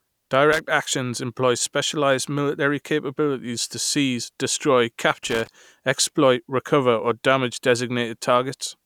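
A speech clip with loose connector crackle, first from 0.53 to 0.59 s just before "actions employ specialized military", then from 5.23 to 5.48 s between "capabilities to seize destroy" and "exploit recover or damage". A worn contact is chopping the signal, so unlike a single clean digital click, each burst is irregular, scratchy crackle.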